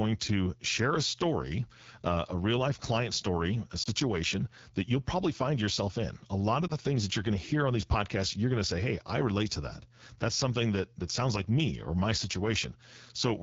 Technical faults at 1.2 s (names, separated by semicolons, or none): AMR wideband (HD Voice) codec